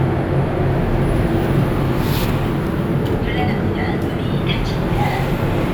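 Nothing stood out on listening to these everyday sounds.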